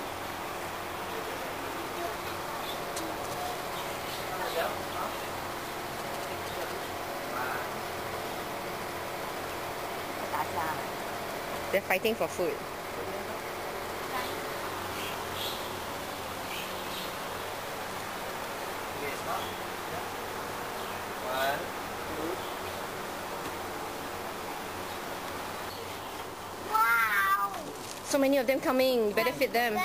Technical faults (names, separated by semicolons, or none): GSM signalling bursts